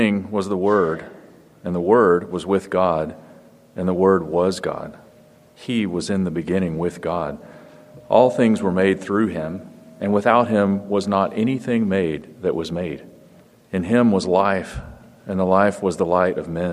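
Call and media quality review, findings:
Drift correction step, 9.32–10.30 s: likely clock-matching resampler stepping playback rate to rebalance its buffer. Audio runs about 5.5% fast for roughly one second, pitch raised 93 cents, near a semitone, then snaps back to normal speed and tuning.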